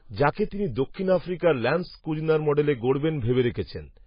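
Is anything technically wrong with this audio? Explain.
Yes. Throughout, the speech has heavy MP3 compression artefacts, likely from a very low bitrate, around 18 kbps. Nothing remains above 5 kHz, and weak frequency components flicker between frames, giving a watery, swirly sound. A spectrogram shows a hard ceiling at 5 kHz over patchy, blocky energy.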